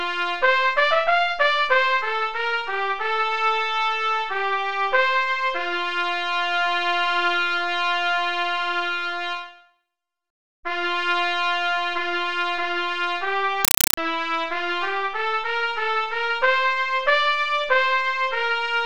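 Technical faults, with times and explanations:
13.65 to 13.97 s, compressed stream played as audio: the sound gives way to harsh, very loud chattering static. An AC-3 bitstream has reached the output as raw samples without being decoded, so each frame plays as a 5.33 ms noise burst then silence, repeating at 31.25 Hz.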